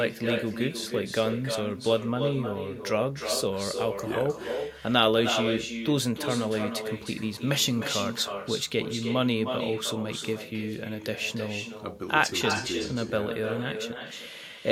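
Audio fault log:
throughout: echo with no canceller. Every phrase returns roughly a third of a second later, about 7 dB quieter and thinner, because the far end's loudspeaker feeds its own microphone and nothing subtracts that path before the signal travels back. On a waveform each speech burst carries a smaller trailing twin offset by around 300 ms; a spectrogram shows ghost copies of each harmonic stack sliding in behind the originals.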